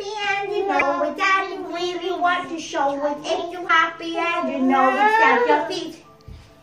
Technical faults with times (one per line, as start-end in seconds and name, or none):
0.77-0.83 damaged data in a compressed stream
3.65-3.70 damaged data in a compressed stream